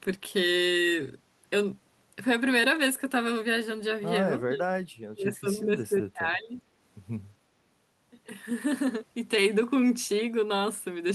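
Speech with speech suppressed in double talk: the level sinks by about 30 dB from 4.44 to 4.74 s, then by about 20 dB from 5.12 to 6.54 s, likely an echo canceller turning down the talker during overlap.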